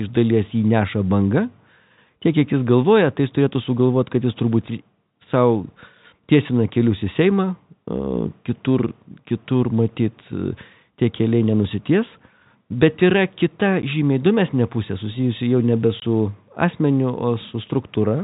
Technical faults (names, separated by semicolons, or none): packet loss filled with silence